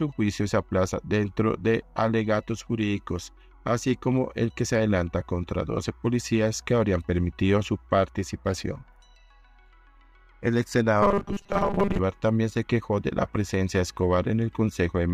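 Between 11.02 and 11.99 s, new audio data likely stopped arriving often enough, so playback looped the last short buffer over most of that stretch. The result is robotic sound from repeated short buffers: a rigid, metallic buzz locked at 200 Hz, which fits a 5 ms buffer.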